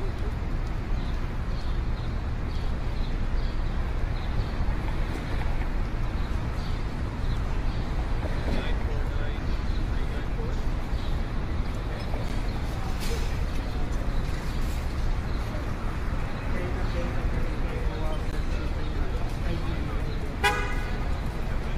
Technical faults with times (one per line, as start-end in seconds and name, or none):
12.29 gap between stream segments
18.31 gap between stream segments